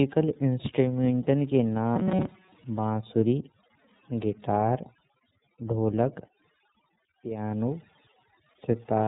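Throughout, the background sinks to near silence with twinkling specks: overdone noise removal is pulling quiet bands of speech down along with the noise. The whole clip also sounds slightly rough and synthetic, with nothing above 3.8 kHz, plainly audible iLBC codec damage that fits its 13.33 kbps mode with 30 ms frames. From 1.96 to 2.52 s, the voice becomes a rigid metallic buzz near 188 Hz for most of that stretch, likely robotic sound from repeated short buffers, with roughly 5 ms of audio looping.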